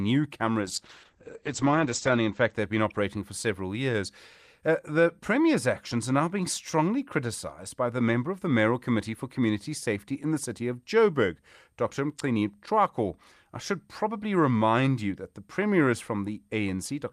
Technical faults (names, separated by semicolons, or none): call bitrate drop